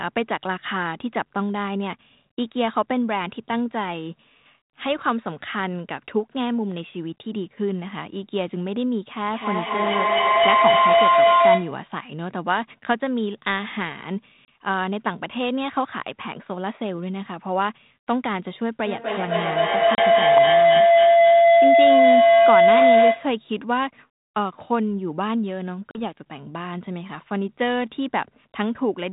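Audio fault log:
2.32–2.34, 14.45–14.48, 19.95–19.99 and 25.91–25.99 s, packet loss on an ADPCM call: hard-edged gaps of 20, 30, 30 and 40 ms, then slightly distorted speech while the decoder's predictor resyncs.
9.26–11.93 and 18.86–23.48 s, feedback howl: a mic-to-speaker loop builds a tone around 700 Hz, repeating about every 300 ms, peaking about 8 and 9 dB over the speech.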